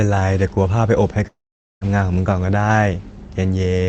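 Speech carried over a call path, most likely interrupted by a long network dropout between 1.27 and 1.84 s, when roughly half a second of packets never reached the receiver. The receiver first stretches the last sound into a short fading buzz, then falls to silence for about 0.46 s, and the speech resumes at 1.84 s with the lost stretch simply missing. Throughout, the codec's high-frequency cut-off sits at 8 kHz, which fits Opus at a modest call bitrate.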